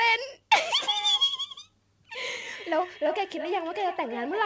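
From 2.39 s to the end, a second device in the same room replays the call and its microphone sends that sound back round the loop, a feedback echo between two devices that neither echo canceller removes. Thinner, ringing repeats follow at roughly 300 ms intervals, peaking about 11 dB below the speech.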